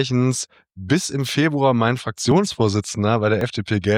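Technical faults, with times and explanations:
2.32 s and 3.41 s, dropped buffer (overrun): two points where the sound jumps ahead about 10 ms with no gap, likely samples overwritten before collection.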